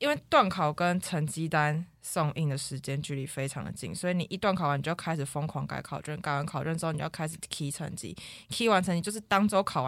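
No technical faults are audible anywhere in the recording.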